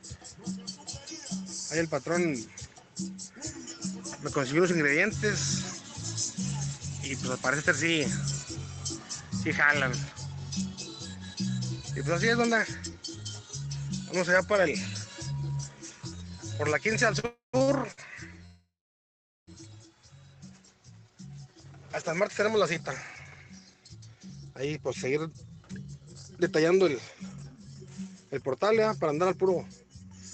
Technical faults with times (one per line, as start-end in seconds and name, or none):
17.19-17.99 repeated stalls (stutter)
17.26-17.55 call audio freeze
18.45-19.49 call audio freeze
20.67-29.37 jitter buffer speed-up